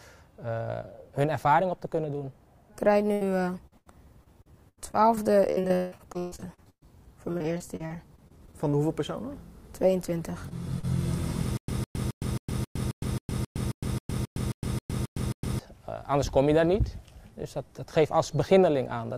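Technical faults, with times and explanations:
3.13–3.23, 3.67–3.74 and 3.78–3.88 s, burst of packet loss: three quick dropouts, each somewhere around 40 to 80 ms of audio missing. The receiver keeps extending the last bit of sound and fades it, so you get a held buzz or hiss before things jump ahead.
4.24–6.86 and 7.32–8.75 s, repeated packet loss (robotic sound): packets keep going missing, 19 holes in the first stretch (longest 160 ms, about a third of it patched) and 12 short ones in the second. Constant patching makes it choppy, with chunks gone.
10.49 and 10.79–10.85 s, short concealed packet loss: two tiny holes, roughly 20 and 40 ms, get filled by carrying the last sound forward and blending back in. Each comes across as a brief smear or wobble rather than an obvious gap.
11.57–15.59 s, stutter with silent gaps: the same 157 ms fragment plays 15 times, each followed by about 111 ms of dead digital silence, so it repeats every 268 ms. 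That's likely a stalled stream replaying its last buffer on each retry, and the audio meant for that span is lost.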